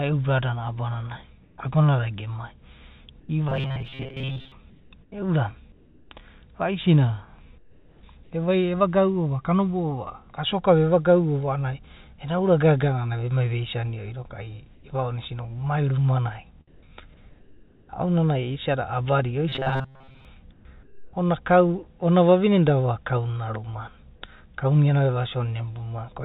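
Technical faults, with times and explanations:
1.43–1.58, 3.2–3.29, 4.7–5.12, 5.72–6.11, 7.58–8.03, 14.75–14.84, 16.68–17.89 and 20.53–21.13 s: comfort noise in place of the background. In these pauses the real room sound, sitting about 30 to 32 dB below the loudest speech, gives way to a smooth, characterless hiss. This is likely discontinuous transmission: the sender stopped sending during silence, and the receiver generated shaped noise to fill the gap. Each patch is usually about 2 to 4 dB quieter and once about 2 dB louder. On a spectrogram each patch is an even, grainless band ending at the 4 kHz ceiling of the G.711 call path, with a small step in level at both edges. On the waveform the noise floor is uniform.
3.49–4.52 and 19.49–20.25 s: robotic sound from repeated short buffers. Here the speech turns into a rigid, metallic buzz at 133 Hz that still roughly follows the words. The cause is likely late-arriving audio: the receiver kept looping a fragment of about 7.5 ms, and for most of each stretch it replayed that fragment instead of fresh sound. 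On a spectrogram this shows as a comb of evenly spaced horizontal lines at multiples of 133 Hz that ignores the natural pitch movement. On the waveform, identical short cycles repeat.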